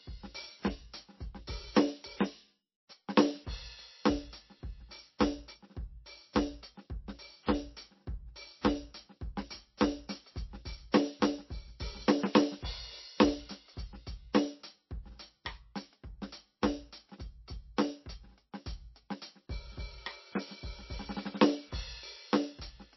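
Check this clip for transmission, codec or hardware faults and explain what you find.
One codec fault runs through the whole music clip. Throughout, the sound is watery and swirly with nothing above 5.8 kHz, likely from MP3 compression near 25 kbps, where starved frames drop treble and weak frequency lines.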